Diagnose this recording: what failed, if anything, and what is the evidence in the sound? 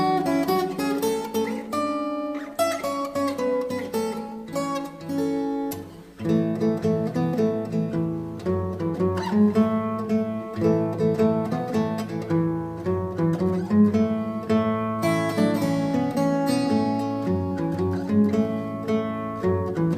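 No failure is evident at any stage of the chain, as nothing in the recording points to a wiring, converter, buffer, format, processing, network, storage or playback problem.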